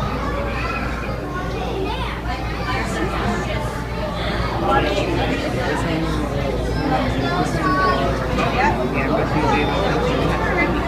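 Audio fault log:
No technical faults can be heard anywhere in the signal.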